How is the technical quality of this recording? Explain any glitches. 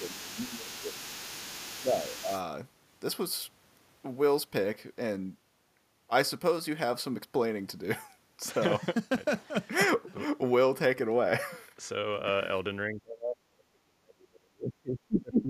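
The recording has two echo-handling faults: a second voice bleeds in during the opening, and the main talker is repeatedly pushed down.

From 0.0 to 2.42 s, the other side's voice leaking through is audible underneath, roughly 15 dB below the talker. The likely cause is residual loudspeaker echo that the canceller failed to remove.

Speech suppressed in double talk occurs from 0.0 to 1.04 s (a dip of around 10 dB), briefly from 1.83 to 2.29 s (a slight dip), and from 12.88 s to the end at 15.49 s, where it drops deeply, by roughly 35 dB. The likely cause is the canceller turning down everything while both sides talk. Unlike a dropout, the talker's voice is turned down because the other side is playing at the same time.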